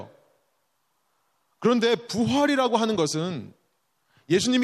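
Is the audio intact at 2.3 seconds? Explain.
Yes, the audio is intact at 2.3 seconds, with no audible fault at that moment.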